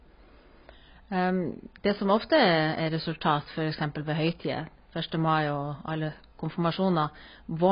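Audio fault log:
throughout: AAC compression, likely at a very low bitrate near 16 kbps; spectrogram shows a hard ceiling at 5.1 kHz, so speech sounds dull and warbly.
0.11 to 7.70 s: clock slip clicks, a soft rattle about every 20 ms, likely from unsynchronised clocks around a thousand ppm apart; waveform shows tiny single-sample jumps, spectrogram faint vertical lines.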